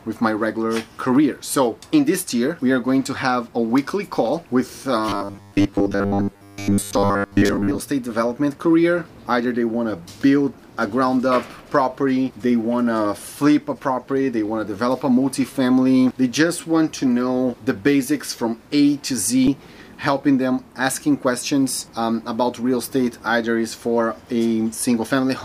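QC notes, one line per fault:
5.09–7.8 s, robotic sound from repeated short buffers: new audio likely stopped arriving fast enough, so playback filled the gaps by looping the last slice of about 10 ms, and most of the real material in this stretch was skipped. Repeating a 10 ms slice over and over stamps a fixed 100 Hz buzz onto the sound, which turns rigid and metallic while following its original contour only loosely.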